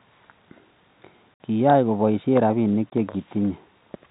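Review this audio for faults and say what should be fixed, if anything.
Packet loss filled with silence opens two holes in the speech: one at 1.34 s lasting 60 ms, and one at 2.9 s, right after "kobaishe rabinik", lasting 20 ms. The missing stretches were replaced with silence, so the waveform drops abruptly to a flat line. On a spectrogram they appear as blank vertical gaps, and both lengths fit 20 ms packets. The narrow telephone band that G.711 coding leaves below 4 kHz remains audible around them. To prevent this, enable packet loss concealment and a suitably sized jitter buffer at the receiver so lost packets are interpolated rather than silenced.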